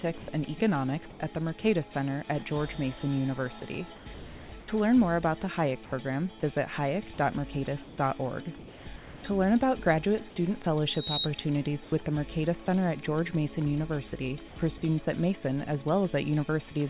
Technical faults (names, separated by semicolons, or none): sound dropped by the voice detector; sound chopped by the voice detector; loudspeaker feedback squeal; comfort noise in place of the background